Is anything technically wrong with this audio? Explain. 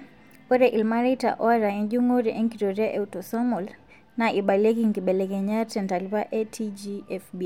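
No, nothing technically wrong can be heard here.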